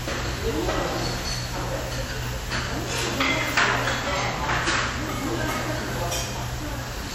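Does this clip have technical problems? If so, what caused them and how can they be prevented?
Yes. Throughout, the sound rings and smears, with a washy hiss that swells and fades with the signal and nothing above 16.4 kHz. That points to a low bitrate, around 48 kbps. The likely cause is WMA compression, whose long transform blocks spread quantisation noise over tens of milliseconds and drop weak components. To prevent it, keep a lossless master and encode with a higher bitrate or a more modern codec.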